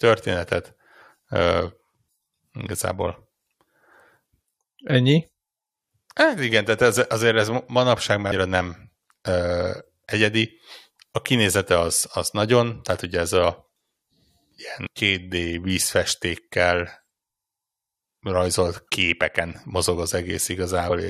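Around 8.29 to 8.32 s, then at 14.86 s and 20.9 s, the speech gets short glitches from damaged data in a compressed stream. Corrupted bytes there make the decoder misread frames and lose sync until it finds the next frame header.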